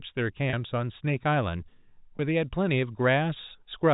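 At 0.50 s and again at 2.17 s, the speech briefly hangs on a slightly held, buzzy tone for about 30 ms and then 20 ms. This is packet loss with pitch repetition: the receiver filled each gap by repeating the last pitch period before the speech resumed.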